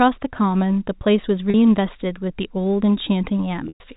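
Packet loss with pitch repetition hits twice: a 40 ms buzzy hold at 1.50–1.54 s, then 120 ms at 3.68–3.80 s that fades to silence before the sound cross-fades back.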